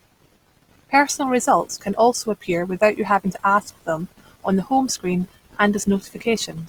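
Throughout the speech, tones sound rough and grainy, likely from Opus compression at about 24 kbps, whose music mode fills starved bands with noise. A spectrogram shows few holes but speckled band textures reaching 20.3 kHz.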